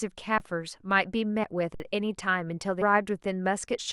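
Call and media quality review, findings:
Underrun with held sample, 0.38–0.40 s (20 ms) and 1.75–1.80 s (about 54 ms). The playback buffer ran dry and the DAC held its last value. The waveform shows a flat line. The spectrogram shows a blank band, and roughly 20 ms and 50 ms of live audio were dropped.

Compressed frames skipped, 1.43–1.47 s and 2.81–2.84 s. Frames were not played, so the speech jumps ahead about 70 ms, then about 200 ms, which fits a 20 ms frame. The spectrogram shows an abrupt content shift and no gap.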